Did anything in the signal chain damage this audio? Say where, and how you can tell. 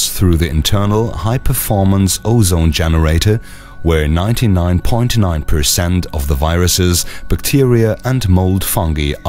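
No, nothing in the signal chain damaged this audio.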